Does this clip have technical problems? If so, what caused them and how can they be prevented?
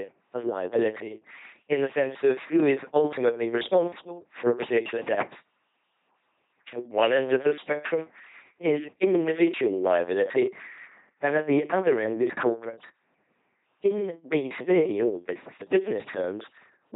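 Yes. Heavy LPC-10 vocoder damage runs through the whole speech clip, giving a buzzy, robotic tone that fits a 2.4 kbit/s link. Each frame is rebuilt from either a pulse train or noise through a short filter. On a spectrogram this appears as rigid harmonic stripes alternating with flat noise blocks, blurred formants, and nothing above 3.8 kHz. Preventing it means sending the audio through a modern wideband codec at a higher bitrate.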